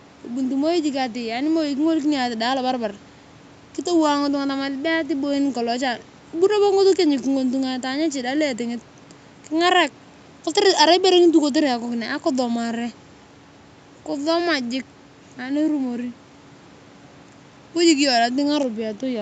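No technical faults can be heard in this speech recording.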